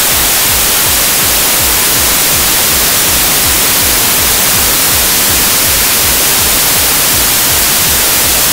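From start to finish the audio is a wall of loud, harsh noise, with the real sound faintly audible underneath, running about 1.33 times too fast and pitched up to match. This is a wrong sample width fault: samples packed as 24-bit integers are being read as 32-bit ones, so most values are stitched from mismatched bytes. Only some keep the true signal's top bits, and four stored samples are consumed as three.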